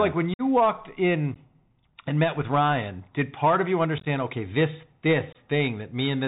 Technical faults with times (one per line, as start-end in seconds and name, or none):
0.00-6.28 Bluetooth CVSD headset codec
0.34-0.42 unconcealed Bluetooth headset packet loss
1.34 unconcealed Bluetooth headset packet loss
3.98-4.07 unconcealed Bluetooth headset packet loss
5.33-5.37 unconcealed Bluetooth headset packet loss